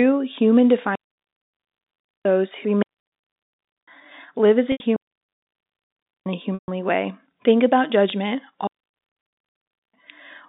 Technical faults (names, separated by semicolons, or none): digital wireless dropout; packet loss with pitch repetition